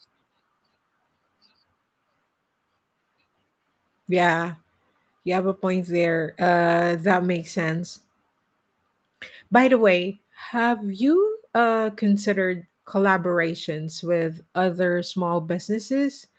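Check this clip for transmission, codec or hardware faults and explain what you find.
No faults found: the speech shows the ordinary marks of a call path, with the lowest bass trimmed by the microphone high-pass and nothing above 8 kHz, which fits a wideband call codec.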